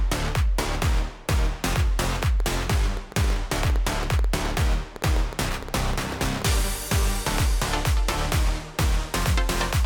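A train of clicks runs from 2.04 to 6.43 s: some thirty near-identical pulses at about 6.4 per second, unevenly spaced, peaking about 5 dB above the sound. Interference from nearby equipment or a faulty connection is the likely source, heard as irregular ticking throughout.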